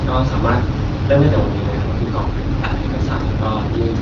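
At 1.90 s an AMR rate drop begins. The speech turns rougher and more synthetic through to the end. Nothing cuts out, which fits AMR-WB stepping down from 12.65 to 8.85 kbit/s.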